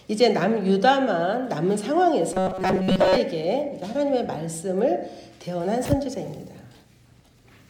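From 2.33 to 3.17 s the sound turns into a rigid, metallic buzz at 188 Hz: robotic sound from repeated short buffers. The likely cause is audio arriving too seldom, so playback loops a fragment of about 5.3 ms, the length that gives 188 Hz, over most of this stretch while real audio is skipped. On a spectrogram, evenly spaced horizontal harmonics at multiples of 188 Hz appear; the waveform shows identical short cycles repeating.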